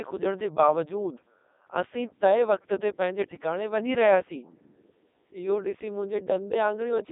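Throughout, a Codec 2 vocoder rebuilds the speech from sine waves, so it sounds robotic and buzzy rather than muffled, with nothing above 3.8 kHz.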